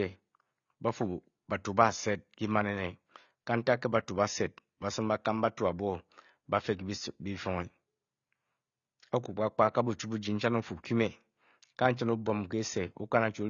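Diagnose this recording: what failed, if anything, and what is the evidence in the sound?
The failure is at the codec stage, and it runs through the whole recording. The speech has a hard ceiling: nothing is present above 7 kHz, so sibilants lose their edge and the sound is dull and smeared, with a warbling, fizzy texture on sustained sounds. The codec damage is plainly audible. The likely cause is AAC compression, AAC-LC at a low bitrate, which fits about 24 kbps. At that rate the encoder lowers its cut-off and coarsely quantises the remaining frequency lines.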